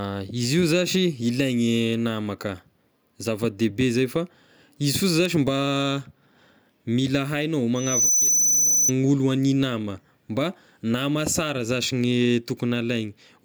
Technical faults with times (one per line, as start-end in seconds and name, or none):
7.75-8.92 loudspeaker feedback squeal